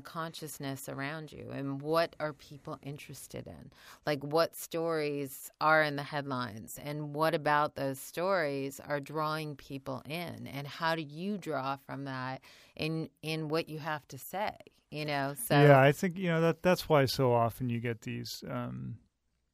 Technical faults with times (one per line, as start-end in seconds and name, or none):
none